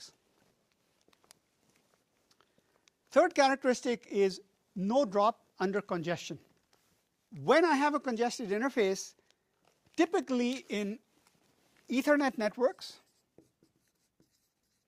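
Nothing here trips up the ear at any point, since no technical faults turn up anywhere in this audio.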